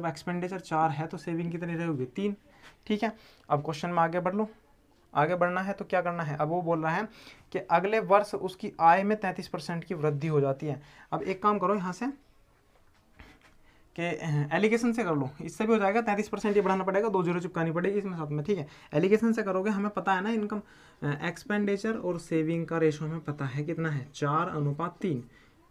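No technical faults can be heard anywhere here.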